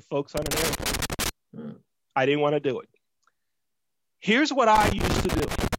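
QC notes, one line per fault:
0.37 to 1.29 s: loose connector crackle. An irregular burst of scratching and crackle sits over the speech for just under a second. A worn or dirty contact is making and breaking as the connector moves, chopping the signal on and off.
4.75 to 5.75 s: loose connector crackle again, lasting about one second. The same rough, uneven bursts return. Each break interrupts the speech, and any DC on the line turns the jumps into pops.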